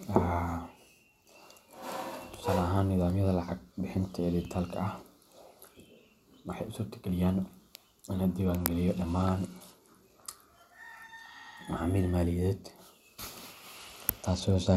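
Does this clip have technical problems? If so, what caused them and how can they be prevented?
Yes. A Bluetooth SBC bit pool drop occurs at 8.45–10.49 s and from 13.77 s to the end, where the congested link likely forced a lower bit pool, consistent with a drop from 31 to 13 (about 94 kbps). The speech turns dull and gritty as the upper sub-bands lose their bits. Reducing radio congestion, by keeping the devices close and clearing competing 2.4 GHz traffic, prevents it.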